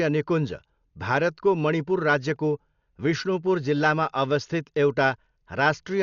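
From start to finish, the speech is dull and band-limited. Nothing is heard above about 6.9 kHz, so sibilants and breaths lose their edge. Voiced sounds carry a rough, fluttering noise around their tones. The damage is heavy. The likely cause is Dolby Digital compression at a low bitrate, consistent with roughly 48 kbps. The encoder narrowed the band and left many frequency lines without detail. The decoder then filled those gaps with noise, which causes the flutter.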